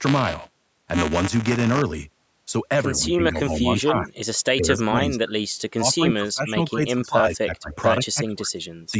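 Buffer tearing runs from 0.0 to 1.82 s. The application filling the ring buffer and the hardware draining it have drifted out of step, so their positions cross inside every period. A small slice of each buffer, a few percent, replays audio from roughly 20 ms earlier, with hard splices on either side. This produces a rattling, robotic buzz at 172 Hz under the speech, which fits a 256-sample buffer. The buzz is present only while the speech is.

Speech suppressed in double talk follows in six stretches: 2.97–3.68 s, 3.86–4.15 s, 4.56–5.32 s, 5.76–7.73 s, 8.11–8.63 s and 8.86–8.94 s. The likely cause is the echo canceller failing to tell this talker apart from loudspeaker echo while the far side spoke, so it ducked everything. The first dip is slight, about 5 dB. The later ones sink about 15 to 25 dB. The call's microphone processing also limits the audio to 8 kHz.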